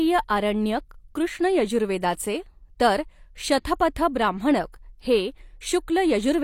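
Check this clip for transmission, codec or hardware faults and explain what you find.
One codec fault stands out: pre-echo at 4.72 s. A transform codec spread its quantisation noise across a whole block, and a sharp attack sat late in that block, so noise scaled for the loud onset also filled the quiet stretch just before it. In this speech, that puts a brief hiss, about 17 ms long, ahead of the attack, and the onset itself sounds softened and smeared rather than crisp.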